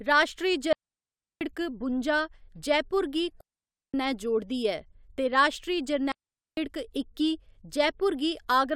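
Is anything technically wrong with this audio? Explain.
Yes, there are three digital wireless dropouts in this speech. The first runs from 0.73 to 1.41 s, just before "बुंजा जयपुर गी". The second runs from 3.41 to 3.94 s, right after "बुंजा जयपुर गी". The third runs from 6.12 to 6.57 s, after "ते राश्ट्री". Each time the receiver lost too much data and muted with a very fast fade, leaving a clean hole of near silence between about 0.45 and 0.68 s long, with no noise burst on either side.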